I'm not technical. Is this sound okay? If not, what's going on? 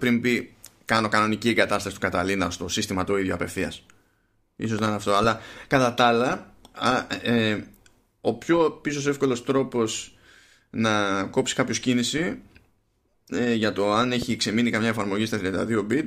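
No. Twice the speech is interrupted by a loud pop, a sharp click-like thump that stands out well above the talking, which carries on underneath. The first comes at 4.79 to 4.81 s, just before "να είναι αυτό"; the second at 14.22 to 14.24 s, between "ε για το αν" and "ξεμείνει καμιά". Each is likely a brief jolt of electricity, such as static, a switch or a loose plug, leaking into the recording.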